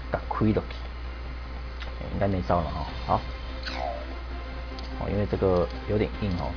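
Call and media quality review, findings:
Nothing stood out on listening to this recording.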